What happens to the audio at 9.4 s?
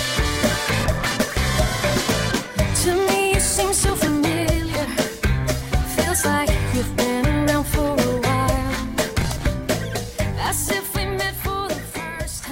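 Processor overload crackle runs from 9.08 to 9.46 s. The processor falls behind and misses a long run of buffer deadlines, points to buffers of around 10 ms, with dozens missed, each simply skipped. The hard-edged gaps pile up into a gritty, tearing crackle over the sound.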